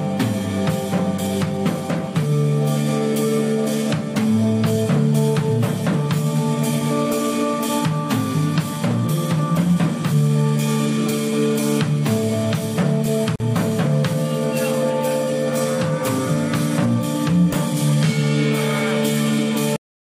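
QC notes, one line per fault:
13.36 s: gap at a join of encoded pieces, a 43 ms gap with smeared edges where separately encoded segments meet untrimmed, then the sound resumes where it stopped.
19.76 s: cut-off end, the audio stops mid-sound and drops straight to digital silence with no decay because the final buffers were never written.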